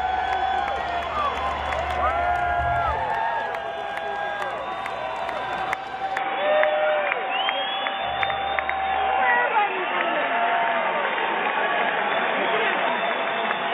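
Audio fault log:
6.17–13.74 s, input switched to a poorer device: from 6.17 s the sound turns dull and boxy, with nothing above 3.8 kHz, a level shift of roughly 5 dB and new background noise about 45 dB down, with no silence at the change. This is likely a jump to a narrower-band microphone or headset call profile.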